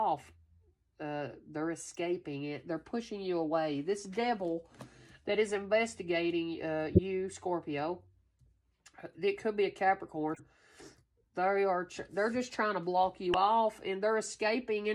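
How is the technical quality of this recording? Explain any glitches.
The recording has five short decoding glitches. A corrupt frame decoded fault occurs at 1.94 s, 5.48–5.50 s, 6.94–6.99 s, 10.34–10.40 s and 13.30–13.36 s. In each case, damaged bits in a compressed frame were decoded anyway, so misread codes placed energy at the wrong frequencies for a few tens of milliseconds. Each one is heard as a brief chirp, squeak, blip or burst of noise. The first two are faint, and the one at 6.94 s is loud and obvious. At 13.30 s, about 20 ms of sound also goes missing.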